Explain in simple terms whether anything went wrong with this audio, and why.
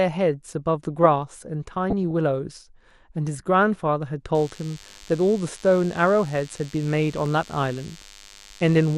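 Yes, a few things went wrong, and you can hear them on top of each other.

The whole recording of speech sounds dull and plainly gurgly, with a grainy edge. That's most likely MP2 compression at a fairly low rate: the encoder splits the sound into narrow frequency bands and simply switches off the top ones when it runs short of data.

From 1.90 to 2.11 s there's a short burbling patch. That's DAB burbling. Weak digital radio reception let corrupted data through, so individual frequency bands got brief blips of noise.

From 4.34 s right to the end, a thin, steady buzz sits under everything. That's DECT cordless phone buzz. A nearby cordless phone or its base sends a radio pulse 100 times a second, and the audio electronics pick it up as a 100 Hz buzz.

Between 7.04 and 7.48 s you'll hear three quick ticks, the longest only about a millisecond. Those are CD scratch ticks. A damaged spot on the disc came round once per spin, and the player patched over the missing data each time it passed.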